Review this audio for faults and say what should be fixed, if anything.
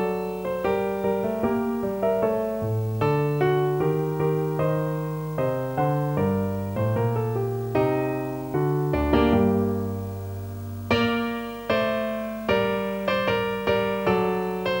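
A video or display buzz runs throughout: a 50 Hz field-rate buzz with hash above it, plus a thin 15.6 kHz line-rate whine, sitting roughly 25 dB below the signal. The high line tone and raspy hash set it apart from smooth mains hum. Fix it by rerouting audio cables away from screens and video leads and breaking the shared ground path between them.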